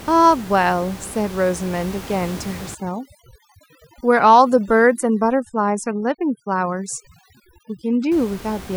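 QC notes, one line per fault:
2.75–8.12 s: overdone noise removal. Suppression set too hard pushes bands near the estimated noise floor to nothing, taking quiet speech detail with them; the room noise, about 18 dB below speech beforehand, drops and breaks up into twinkling specks. Spectrogram shows blank gaps dotted with isolated time-frequency blips.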